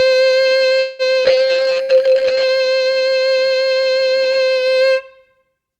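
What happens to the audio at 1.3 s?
Short concealed packet loss at 1.23 to 1.28 s: audio arriving just before this point never reached the decoder in time. The receiver papered over the gap by extending the preceding music for about 16 ms and then skipping ahead, so around 60 ms of material goes missing in all, with the playout delay shrinking by roughly 40 ms. It comes across as a brief smear or wobble with a small jump in the music.

A call bitrate drop follows from 1.30 to 2.55 s. The connection's bandwidth estimate fell and the encoder was forced onto far fewer bits. The quality slides from full-band to something that fits roughly 9 kbps rather than 64 kbps, and the bottom of the dip lasts about 1.1 s. The audio bandwidth narrows from 20 kHz to 8 kHz, so the music sounds muffled, coarse and watery until the bitrate recovers.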